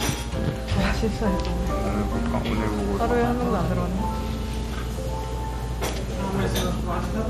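A recording of everyday sound carries MP2 compression damage throughout. Nothing survives above 14.9 kHz, so it sounds dull. Upper bands flicker in and out, with a gurgling, granular texture. This is likely Layer II coding starved of bits, consistent with roughly 64 kbps.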